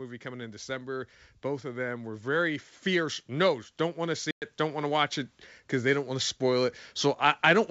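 Automatic gain rising runs from 0.05 to 5.17 s. The gain control judged the input too quiet and kept turning it up, so speech and background swell together by about 10 dB across those five seconds instead of holding a steady level.

Packet loss on an ADPCM call opens a hard-edged silent hole from 4.31 to 4.44 s. A gap of 110 ms points to roughly ten lost packets. The decoder's predictor and step size then no longer match the sender's, so speech comes back with brief, slight distortion before settling. Through all this the G.722 wideband coding itself keeps speech clear up to about 7 kHz.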